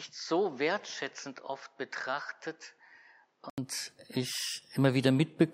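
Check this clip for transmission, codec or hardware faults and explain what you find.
One fault is present. From 0.0 to 3.58 s, the audio is dull, quieter and faintly noisy, with nothing above 7.6 kHz. An 80 ms silence precedes fuller sound. The likely cause is an input switched to a poorer device.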